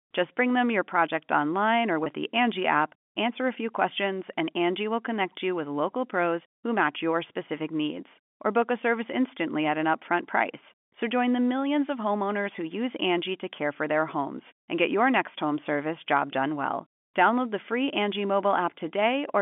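Just after "your project online or", at 2.04 to 2.06 s, there's a packet loss with pitch repetition. About 20 ms of audio went missing, which fits a single lost packet. The receiver filled it by looping the last pitch period, so you hear a brief, slightly buzzy hold before the speech carries on over the G.711 telephone band.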